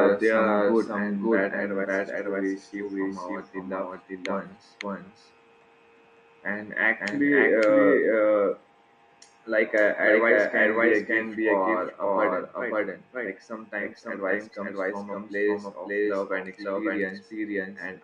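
From start to finish the speech carries a doubled audio track: a second full-band copy trails about half a second behind at roughly the same level, dry and uncoloured. It's likely a second capture path or an edit leaving two copies out of step.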